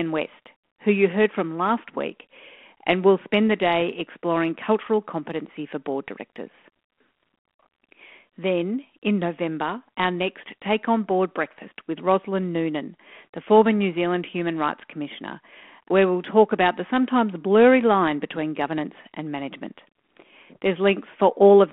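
Nothing in this speech stood out on listening as a technical fault, with the telephone-band G.726 coding at 32 kbit/s heard as part of the line itself.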